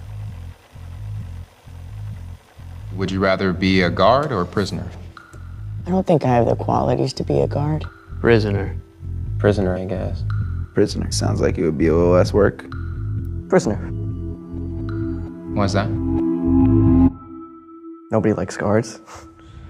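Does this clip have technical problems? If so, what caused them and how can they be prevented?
No, nothing stood out on listening as a technical problem in this clip.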